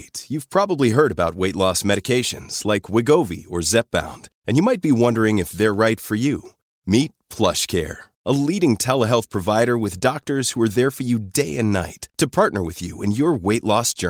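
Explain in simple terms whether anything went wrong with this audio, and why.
Nothing went wrong with this audio, because the speech comes through without any technical fault to be heard.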